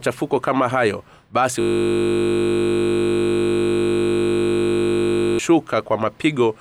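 A system hang loop from 1.61 to 5.39 s, after "kama hayo basi": the stalled system cycles one 20 ms buffer, heard as a steady 50 Hz buzz.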